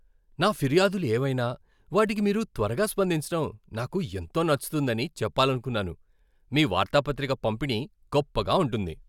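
No technical faults are audible.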